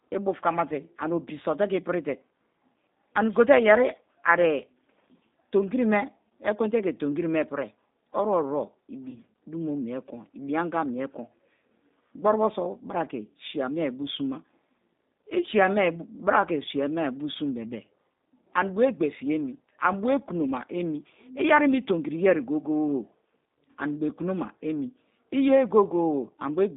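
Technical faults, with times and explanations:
Throughout, G.729 codec: the speech has passed through a low-rate VoIP codec, most likely G.729A at 8 kbit/s. It rebuilds each 10 ms frame from a vocal tract filter, a pitch predictor and a sparse set of pulses, not the actual waveform. The line band runs from about 150 Hz to 3.7 kHz, so the sound is thin and muffled. The coding damage is plainly audible as a rough, slightly synthetic texture.
9.09 to 9.19 s, VoIP packet loss concealed by the speech codec: about 40 ms of audio went missing, which fits two lost packets. The decoder covered the gap by extending its last pitch and filter settings and turning down the gain frame by frame. The result is a brief stretched sound that fades. Because each frame depends on the one before it, the speech stays weak or distorted for tens of milliseconds or more after the gap.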